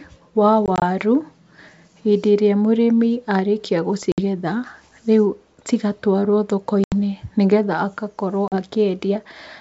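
Packet loss on the ADPCM call strikes four times. Lost packets become silence, and the decoder's predictor and step size drift from the sender's, so after each hard-edged hole the speech returns slightly distorted and settles within tens of milliseconds. From 0.66 to 0.83 s, about 60 ms drops out in short bursts of up to 20 ms spread over 160 ms. At 4.12 to 4.20 s, after "hĩndĩ ĩrĩa mũrĩmi arĩkia", 60 ms is lost, roughly three packets. At 6.84 to 6.93 s, between "rĩu cigatwarwo" and "nĩ getha", 80 ms goes, around four packets. At 8.48 to 8.57 s, 40 ms is lost. The underlying G.722 wideband coding at 64 kbit/s carries clear speech with at most faint hiss.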